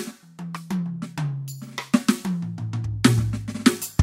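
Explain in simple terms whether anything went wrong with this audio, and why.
Nothing went wrong with this music recording, and no technical fault can be heard anywhere in it.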